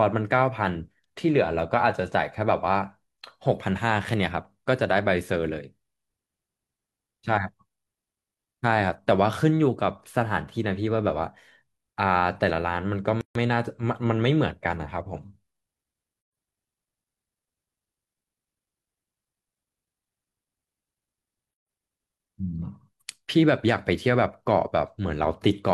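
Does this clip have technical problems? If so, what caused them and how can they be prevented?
Yes. The speech drops to silence three times, with gaps at joins of encoded pieces at 13.21–13.35 s (144 ms), 16.21–16.33 s (116 ms) and 21.54–21.67 s (129 ms), each with smeared edges before the sound resumes where it stopped. Separately encoded segments were concatenated untrimmed, so each encoder's start-up delay and final-frame padding remain as dead air. Prevent this by trimming encoder delay and padding, or by encoding the audio as one continuous stream.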